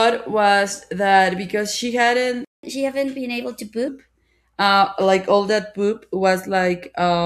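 A speech recording hit a playback stall: the player most likely ran short of buffered data or had its output thread blocked, so after "was that because she" the sound drops to silence from 2.45 to 2.63 s, a gap of about 0.19 s, before resuming where it stopped. The player then did a catch-up at higher speed, resampling its backlog to recover the lost time, so from 2.63 to 3.88 s the speech runs 1.15 times fast and sits about two semitones higher before settling back to normal.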